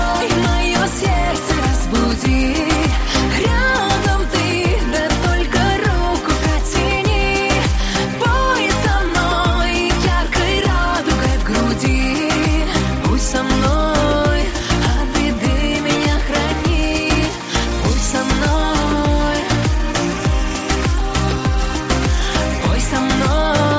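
No technical faults can be heard anywhere in the audio; the signal holds steady and continuous throughout.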